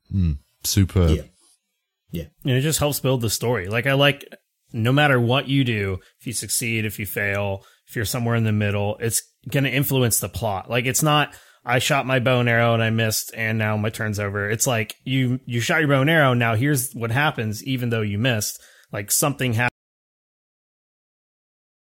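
At 19.68 s the speech cuts off abruptly in an audio dropout to silence that runs to the end of the clip, about 2.16 s. The gap is silent with no room tone, likely from the input being lost while the recorder kept writing.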